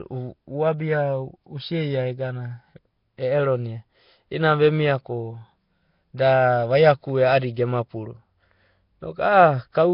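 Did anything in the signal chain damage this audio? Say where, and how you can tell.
Yes, at the codec stage: throughout, the speech sounds rough, hissy and underwater with nothing above 5.3 kHz, likely Nellymoser compression noise-filling bit-starved bands.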